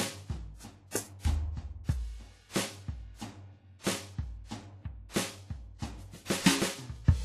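From the first bar to the end, this music sounds smeared and washy, with ringing around attacks and a hiss that swells and sinks with the playing. Nothing comes through above 10.1 kHz. It's likely WMA compression, heavily damaged, which fits a bitrate somewhere near 24 kbps.

Running alongside that is periodic clock jitter. Something is wobbling the converter's clock at around 1 kHz, so every component of the music picks up sidebands at roughly that spacing. The result is a gritty, metallic edge, most noticeable on the brighter parts.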